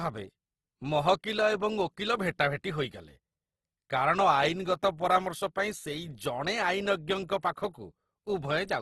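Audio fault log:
throughout: Opus compression. The speech was likely encoded with Opus in its CELT mode at a rate that fits about 16 kbps. Starved bands are filled with folded or noise content, so the sound is plainly grainy and rough, with nothing above 12.1 kHz.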